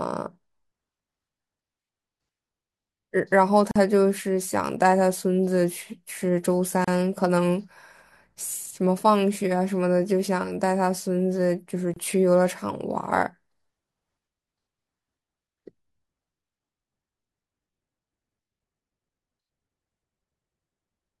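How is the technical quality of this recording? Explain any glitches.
The speech breaks off three times, at 3.71–3.76 s (43 ms), 6.84–6.88 s (32 ms) and 11.94–11.96 s (28 ms). Each silence has smeared edges, and the sound then picks up exactly where it stopped. These are gaps at a join of encoded pieces. The segments were encoded separately and spliced untrimmed, so each encoder's start-up delay and final-frame padding remain as dead air.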